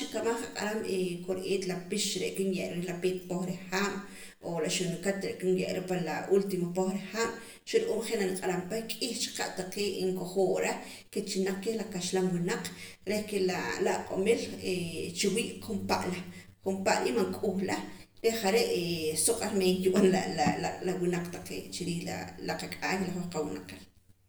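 One channel runs roughly 10 milliseconds behind the other throughout, and when the two are summed to mono this channel delay causes comb filtering: cancellations fall at evenly spaced frequencies starting near 50 Hz, leaving the speech sounding hollow and phasey.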